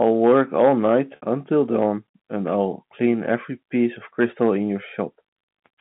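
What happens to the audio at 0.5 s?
Hard clipping runs from 0.02 to 1.32 s: speech overdriven by about 6 dB has its peaks sheared flat, giving crackle on peaks, flat-topped waveform peaks, and spurious high harmonics on the spectrogram.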